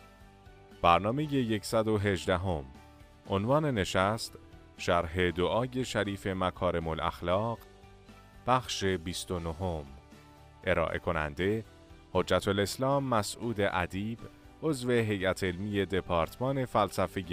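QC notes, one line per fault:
No faults found on this pass; nothing to log.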